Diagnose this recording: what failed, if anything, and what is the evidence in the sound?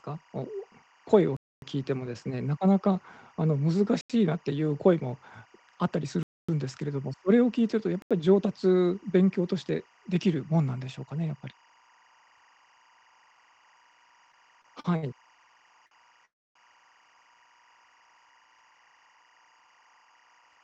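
Timecode bleed in the analogue wiring: a steady chirping warble sits behind the speech for the whole clip, about 35 dB below it, switching between about 1 kHz and 2 kHz. Its rhythm fits 23.976 fps linear timecode leaking from a neighbouring cable. On a spectrogram it appears as two constant horizontal bands.

Blocks of digital silence at the driver or buffer stage: the audio drops out at 1.37–1.62 s and 6.23–6.49 s (256 ms each) and at 4.01–4.10 s and 8.02–8.11 s (85 ms each). Each hole cuts out and back with hard edges. The 85 ms blocks fit a 4096-sample buffer that was not filled in time. The waveform shows flat lines, and the spectrogram shows vertical streaks at the edges.

Repeated stalls (stutter) in the network and jitter buffer: from 14.32 to 15.05 s the speech drags in four catches. Late packets emptied the buffer repeatedly, and the receiver held the last sound for 148 ms in total, the longest hold being 62 ms. 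Nothing is lost. A spectrogram shows smeared, stretched segments.

A short stall from a late packet: at 15.86–15.93 s one sound is held about 47 ms too long while the receiver waited. It then resumes from the same point with nothing missing. The spectrogram shows a brief horizontally stretched patch.

Call audio freeze: at 16.25–16.57 s the speech stops for about 302 ms. A short fading buzz is followed by roughly 280 ms of silence, and then the speech resumes exactly where it stopped. The likely cause is packets held up in the network. The waveform shows a decaying tail into a flat gap.

Jitter buffer speed-up: from 18.32 s to the end the speech runs at about 111% speed at unchanged pitch and sounds hurried. The receiver was trimming pitch-period pieces to shed accumulated delay. Spectrogram harmonics stay level while syllables compress in time.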